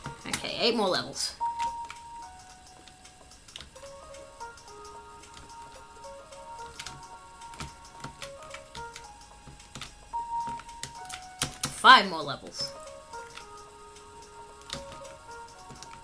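No technical faults can be heard anywhere in this audio. There is nothing in it that calls for a time mark or a closer look.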